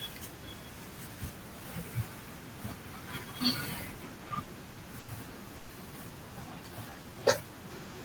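From 4.15 to 5.11 s the speech stutters through six repeated stalls. Late packets emptied the buffer, and about 210 ms of held sound fills the gaps, the longest lasting 90 ms.

At 5.56 to 5.72 s a call audio freeze holds the sound for 130 ms, then resumes where it stopped. Delayed packets likely drained the jitter buffer.

From 6.72 to 7.44 s a jitter buffer slow-down stretches the speech. Repeated pitch periods add 92 ms, so it plays at 89% speed with unchanged pitch.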